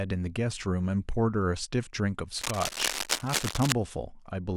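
From 2.36 to 3.73 s, harsh scratching and rustling sits only a little below the speech: cable scratch noise, likely from a worn connector whose contact resistance jumped while moved.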